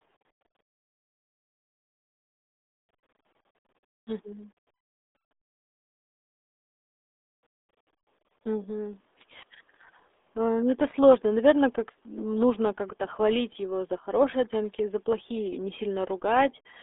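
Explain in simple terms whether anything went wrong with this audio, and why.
The speech went through the RealAudio 14.4 codec, an old dial-up-era format, for the whole clip. It keeps only a narrow band, from 250 Hz to 3.6 kHz, with nothing above 3.8 kHz, and damages what remains heavily, so the voice sounds muffled and gargly from start to finish.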